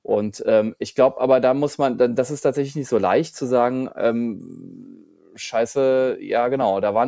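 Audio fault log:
No faults heard anywhere in this speech recording.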